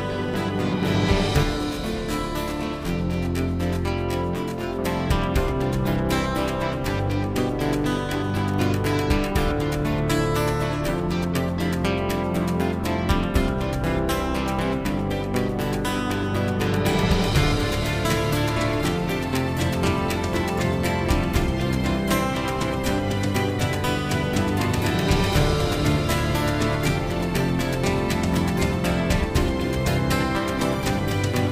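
From 1.43 s to 4.79 s the sound takes on a rough, slightly doubled quality typical of channel delay (comb filtering). One channel arrives around 20 ms behind the other, and when the two are summed to mono, the material they share cancels at a series of evenly spaced frequencies. The first notch sits very low, near 20 Hz, with further fixed notches repeating up the spectrum.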